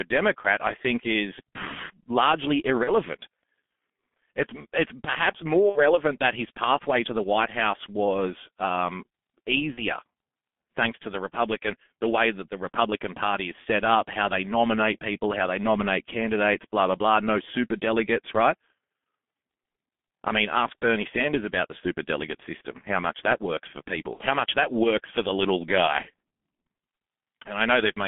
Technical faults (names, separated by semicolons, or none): G.723.1 codec; VoIP packet loss concealed by the speech codec